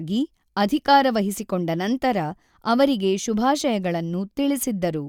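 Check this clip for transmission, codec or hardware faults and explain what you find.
No faults turn up anywhere in the clip.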